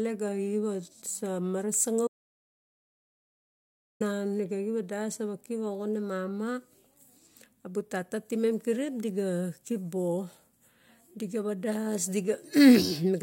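An audio dropout to silence runs from 2.07 to 4.00 s: the speech cuts to dead silence for about 1.93 s, likely from a lost input.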